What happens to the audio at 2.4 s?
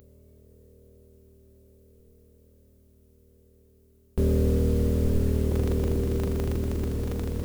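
At 2.4 s the sound nearly vanishes, about 39 dB down, from 0.0 to 4.18 s, likely one channel inverted: unlike a dropout, a faint difference residue survives mono summing.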